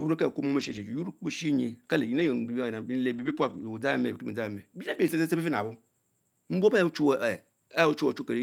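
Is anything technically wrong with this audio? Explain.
Yes. The speech briefly turns rough, grainy and noisier at 0.59–0.77 s, 2.19–2.25 s, 3.13–3.63 s (the longest, about half a second) and 4.93–4.95 s, with no dropout. This is a lost packet rebuilt from error correction. Packets went missing, but each following packet carried a low-bitrate copy of the lost one. The decoder played those coarser copies, so the audio stays continuous but its quality dips at each of these points.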